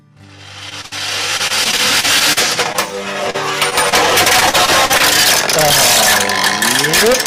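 At 0.69 s and again at 0.81 s the audio briefly smears or wobbles: short concealed packet loss, where the receiver continued the last sound across roughly 20 ms of missing audio each time. Right after, from 0.86 to 0.93 s, a burst of packet loss leaves a held, fading patch of about 54 ms standing in for 60 ms that never arrived, so the sound jumps ahead when it resumes. Between 1.37 and 2.76 s the audio turns choppy and robotic. This is repeated packet loss: nine separate gaps, the longest 39 ms, about 200 ms lost in total, each patched by extending the preceding sound. Further short concealed losses cause brief smears at 3.30 s (about 40 ms missing), 3.70 s and 3.89 s (about 20 ms each). From 4.40 to 5.02 s the robotic choppiness returns, with five gaps, the longest 41 ms, and about 140 ms missing. Concealment fills 22% of that stretch against 14% in the earlier one.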